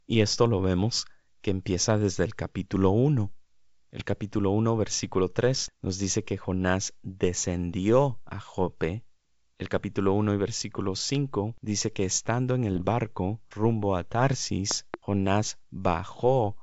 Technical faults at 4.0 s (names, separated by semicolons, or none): bit errors on an ADPCM link